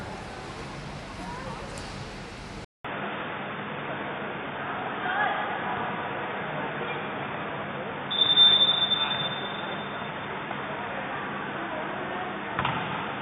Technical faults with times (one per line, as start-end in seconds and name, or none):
2.65-13.22 input switched to a poorer device